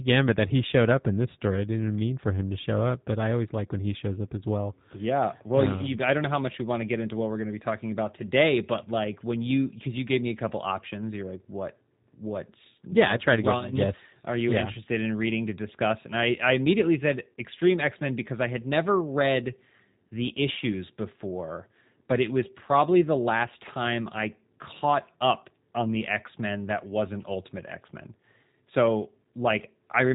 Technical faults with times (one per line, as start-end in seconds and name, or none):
0.00-30.14 G.729 codec
13.34-13.81 loudspeaker feedback squeal